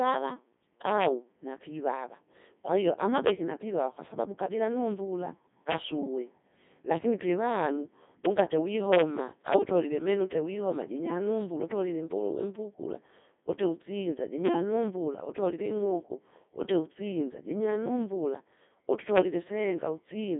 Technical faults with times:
0.00-20.39 Codec 2 vocoder

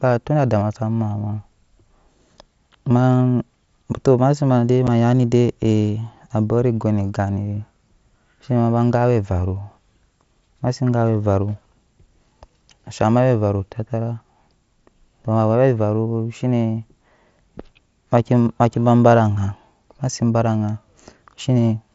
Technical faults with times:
4.87 unconcealed Bluetooth headset packet loss

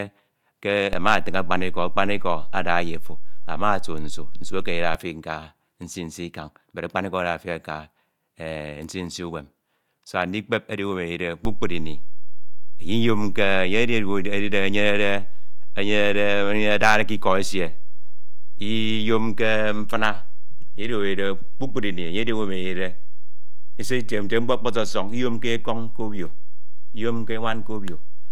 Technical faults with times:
0.93-4.95 DC step
11.45-28.32 DC step

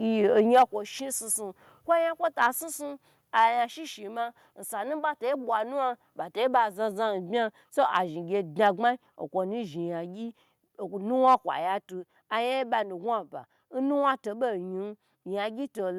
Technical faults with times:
0.37-0.63 microphone overload
0.62 microphone volume stepped down
2.41-2.47 microphone overload
3.38-3.44 microphone overload
8.65 microphone overload
8.76 microphone volume stepped down
11.27-11.35 microphone overload

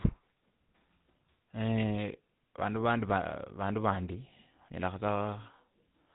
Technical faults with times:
0.00-6.15 GSM full-rate codec

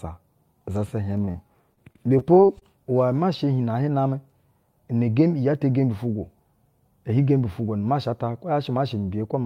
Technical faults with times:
1.25-1.29 short stall from a late packet
1.31-1.36 short concealed packet loss
1.74-2.63 repeated packet loss (robotic sound)

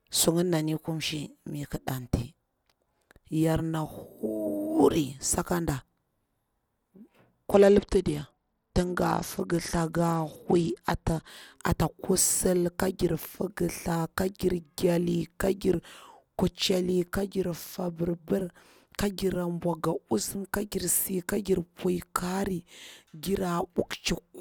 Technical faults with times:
7.49-11.27 Bluetooth SBC bit pool drop

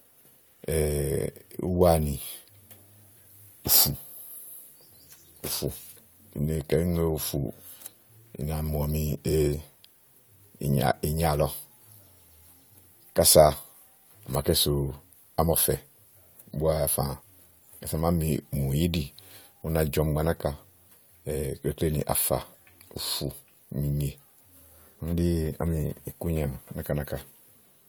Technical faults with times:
none

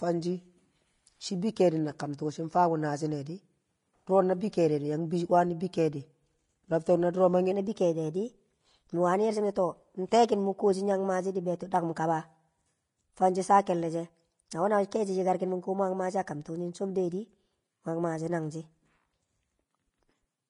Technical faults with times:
0.00-20.49 Vorbis compression
1.99 pre-echo
7.51-20.49 section at the wrong speed

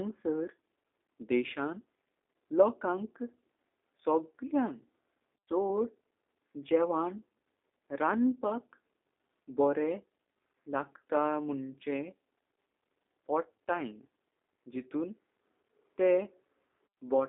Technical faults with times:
0.00-17.28 G.729 codec

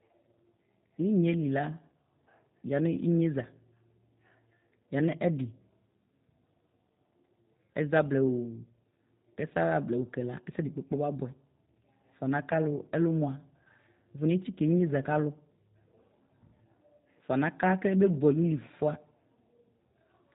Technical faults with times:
0.00-20.34 G.729 codec

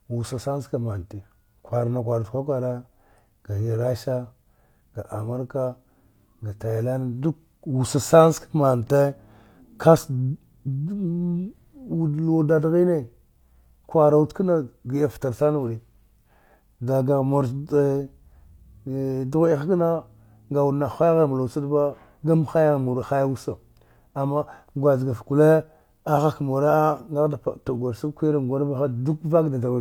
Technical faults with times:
none

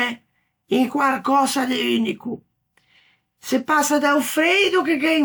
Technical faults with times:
none

